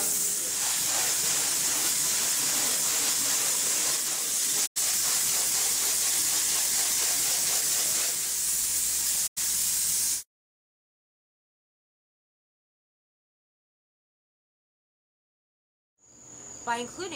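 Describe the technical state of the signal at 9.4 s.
A digital broadcast dropout runs from 9.26 to 9.40 s: the receiver muted on bad frames, fading out over 20 ms and losing about 85 ms of sound.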